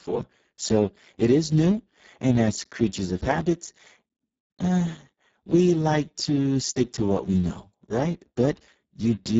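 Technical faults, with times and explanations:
Throughout, Speex codec: heavy low-bitrate coding, which fits about 6 kbps, leaves the speech noisy and hoarse, with nothing above 7.7 kHz.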